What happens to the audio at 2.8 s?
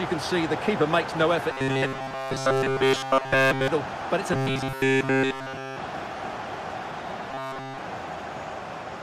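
At 2.8 s the sound is a rigid, metallic buzz pitched at 133 Hz, which loosely follows the original contour. This is robotic sound from repeated short buffers, running from 1.53 to 3.68 s. New audio likely arrives too seldom, so essentially every gap is filled by looping a segment of roughly 7.5 ms while the real material is skipped.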